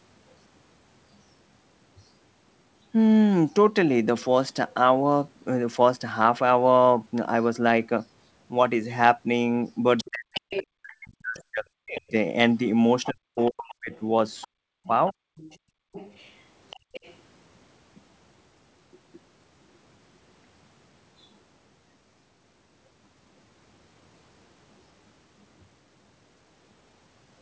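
An echo canceller likely failed to remove the loudspeaker signal, so the other side's voice leaking through is heard from 9.97 to 10.62 s, about 10 dB below the talker, then from 11.97 to 12.11 s and 13.03 to 17.15 s, about 20 dB down. During these overlaps, speech suppressed in double talk is likely the canceller turning the talker down along with the echo. The voice dips sharply, by roughly 40 dB at its deepest, in pieces between 10.1 and 12.14 s, 13.11 and 13.92 s, and 14.48 and 15.36 s. The canceller then clamps the microphone hard, producing background gated by the echo canceller: the room sound drops about 38 dB from 15.64 to 15.92 s and about 40 dB from 16.8 to 16.93 s before returning. Nothing is heard above 8 kHz, which fits the 64 kbps G.722 call path.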